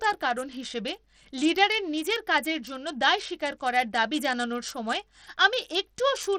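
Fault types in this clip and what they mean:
Bluetooth SBC compression: The speech carries plainly audible codec damage across the whole clip. The highest frequencies thin out and flicker instead of holding steady. A gritty, granular noise rides on the voice, along with aliasing. This is likely Bluetooth SBC compression at a low bit pool, consistent with roughly 80 kbps. SBC splits the signal into a few wide sub-bands and shares out bits crudely. The weak top bands starve first, and the rest are quantised coarsely.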